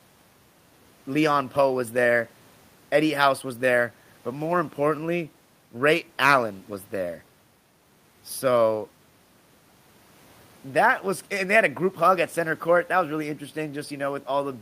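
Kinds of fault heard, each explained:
Nothing here to flag: the speech comes across without any audible technical faults from the first moment to the last.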